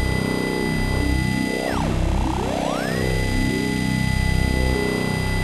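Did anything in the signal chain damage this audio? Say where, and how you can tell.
No, nothing in the chain has audibly damaged this audio. No stage, from the wiring and converter through to storage and playback, has left a mark that can be heard.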